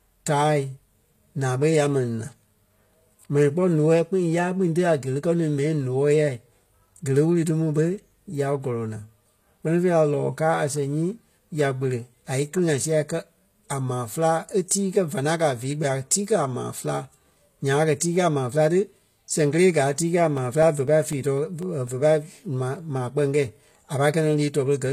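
Throughout the speech, the treble sounds synthetic and lispy, likely from HE-AAC compression at a low bitrate near 24 kbps. A spectrogram shows copied, smeared upper bands ending sharply at 14.9 kHz. From 14.68 to 14.71 s comes pre-echo: a 24 ms hiss smears ahead of a sharp attack, visible as faint noise before the waveform's onset. Between 20.38 and 21.88 s, periodic USB or driver dropouts cut roughly 1 ms of audio to silence every 0.25 s, about seven times. Each is heard as a tick and shows as a thin vertical gap.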